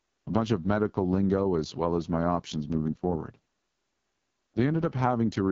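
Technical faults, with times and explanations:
Throughout: AMR wideband (HD Voice) codec. The speech is rough and raspy, with a gritty, buzzing edge. Nothing is heard above about 7.1 kHz. The codec rebuilds speech from a pulse-driven model of the vocal tract and fills the top band with shaped noise. Here so few bits carry that model that the pulses and the filter shape come out coarse. The heavy damage fits the codec's lowest rate, around 6.6 kbit/s.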